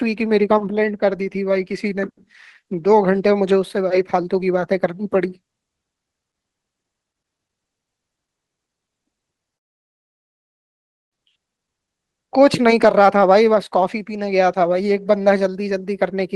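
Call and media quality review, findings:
Long network dropout, 9.55–11.14 s: speech stops, last sound trails briefly into a fading buzz, then about 1.6 s of near silence; speech resumes with that stretch missing. Likely packet loss upstream, receiver concealment exhausted before audio returned.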